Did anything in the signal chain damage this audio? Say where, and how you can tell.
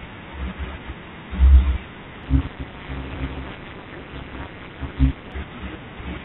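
Yes. From 2.24 to 5.32 s there is overlap-add ripple: a metallic buzz around 200 Hz, dipping about 60 dB each frame. Frames were resynthesised with mismatched windows. Unlike irregular packet-loss dropouts, it is strictly periodic. The G.711 call path's 4 kHz band limit is also audible.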